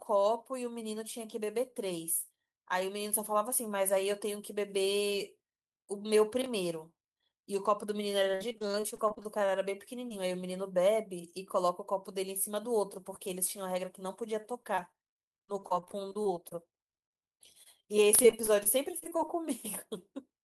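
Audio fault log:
6.42–6.46 s, chunks out of order: a brief jumbled moment as one 20 ms chunk plays one slot late, leaving hard joins where the order breaks.
8.31–9.50, 14.41–16.53, 16.95–17.85, 18.23–19.44 s, repeated packet loss (robotic sound): choppy speech as holes of up to 53 ms keep recurring and are patched by extending the previous sound.
10.09–10.22 s, short concealed packet loss: a momentary smear where about 20 ms went missing and was bridged by continuing the preceding sound before blending back.
13.29–13.86 s, jitter buffer speed-up: speech runs slightly hurried, about 105% speed at unchanged pitch, as roughly 40 ms of pitch-period slices are trimmed to cut delay.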